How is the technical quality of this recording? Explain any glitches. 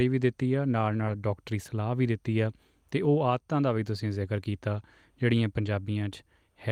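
The speech has three brief rough patches where lost packets were rebuilt rather than dropped.

Lost packets rebuilt from error correction occur at 1.07–1.13 s, 4.73–4.79 s and 5.65 s. Each lost packet was replaced by the lower-bitrate copy carried in the next packet, so nothing goes silent. The 40 ms spans, consistent with two lost packets each, and the 20 ms one, consistent with a single lost packet, instead sound momentarily grainy and noisier.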